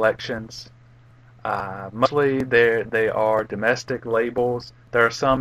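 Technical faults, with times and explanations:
0.37 s and 2.05–2.07 s, compressed frames skipped: the audio jumps ahead twice because whole compressed frames never got played, either missing from the file or refused by the decoder as damaged. The first jump drops about 70 ms, roughly three frames. The second drops about 200 ms, around seven frames. The step sizes point to frames of about 23.2 ms. Each jump lands as an abrupt seam where the sound leaps forward.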